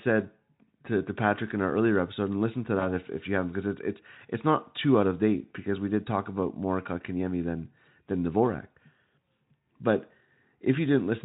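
Between 2.79 and 2.87 s, after "episode and listen to" and before "if if you haven't", VoIP packet loss concealed by the speech codec appears. A gap that fits one lost 20 ms frame is bridged by the Speex decoder extending the preceding pitch and filter into a brief fading buzzy tone or coloured noise. Unlike a plain dropout, there is no silence or click, and the speech sounds weakened for a moment as the decoder recovers.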